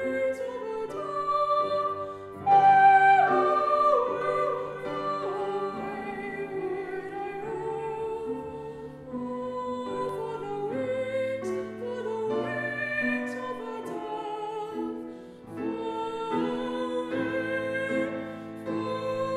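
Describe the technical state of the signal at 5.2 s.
At 5.2 s everything is heard twice: a second full-band copy trails the original by about half a second, roughly 5 dB quieter, with no decay or room colour, so it reads as a flat, detached repeat rather than an echo. This doubled audio track runs from 4.21 s to 10.09 s, cutting in and out abruptly at both edges. It is likely caused by the same signal being captured a second time through a slower path, or an edit leaving two copies out of step.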